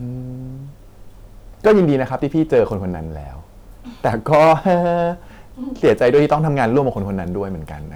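A stage in the chain is being driven past what it can pass, so the speech peaks are sliced flat in four bursts of hard clipping: 1.66 to 2.02 s with about 8 dB of overdrive, 2.40 to 2.60 s at about 3 dB, 4.06 to 4.74 s at about 9 dB, and 5.84 to 6.78 s at about 6 dB. The flattened tops spray harmonics high up the spectrum, heard as crackle at 2.40 s and a harsh fuzz over the heavier stretches.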